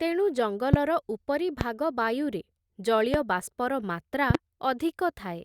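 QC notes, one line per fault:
0.74–0.76 s, 1.61–1.64 s, 3.14–3.17 s and 4.30–4.37 s, loud pop: a single sharp pop at each of the first three times and a quick double pop at the last, each peaking around 20 dB above the speech. The sound is likely a voltage step or pulse, such as a plug, switch, static discharge or driver glitch, which the following circuitry shapes into a short thump. Unlike a dropout or digital click, the speech carries on underneath without a gap.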